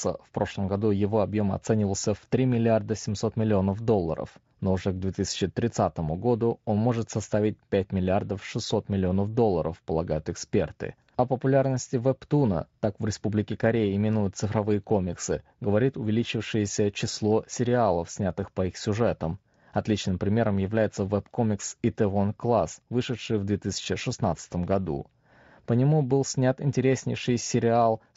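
No technical faults are audible.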